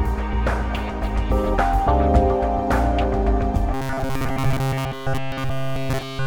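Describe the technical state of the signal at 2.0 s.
The signal at 2.0 s is intact, with no fault audible at that point.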